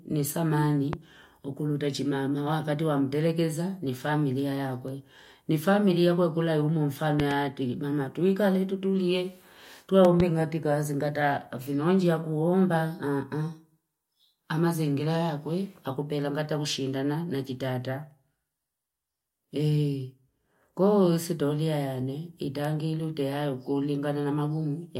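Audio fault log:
0.93–0.96 s, 7.20–7.33 s and 10.05–10.22 s, loud pop: a sharp thump lands on top of the speech each time. It's a single pop at 0.93 s and a quick double pop at the other two. The first two jump roughly 15 dB above the speech and the last about 10 dB above it, while the talking carries on underneath. The likely cause is a sudden voltage step from a plug, switch, static or driver glitch, which the downstream circuits turn into a short pulse.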